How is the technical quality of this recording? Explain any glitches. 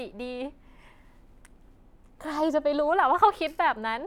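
No glitches or faults are audible.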